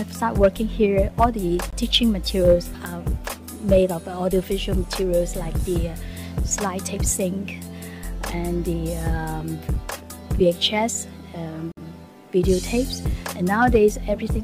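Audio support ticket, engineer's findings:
Two brief dropouts to dead silence, audio then resuming. First at 1.70 to 1.73 s, about 22 ms gap. Second at 11.72 to 11.77 s, about 55 ms. Likely a Bluetooth stall: link interference delays packets, the headphone buffer runs dry, and playback pauses until retransmits land. Both are short.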